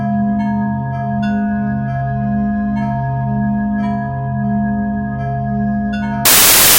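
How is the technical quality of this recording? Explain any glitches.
The music has one clear fault, right at the end. From 6.25 s to 6.78 s, the samples are built from the wrong bytes. The reader misaligns or swaps the bytes of each sample, so the fast-changing low bits become the large values. The result is a burst of loud, harsh broadband noise replacing the music.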